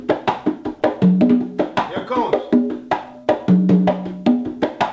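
At around 3.24 to 3.28 s there's a short concealed packet loss. About 20 ms of audio didn't reach the decoder in time, and the receiver covered the gap by extending what came just before, with roughly 21 ms of filler, then faded back into the real signal. You hear it as a tiny smear or wobble rather than a dropout. The call path tops out at 8 kHz, which fits a wideband codec like G.722.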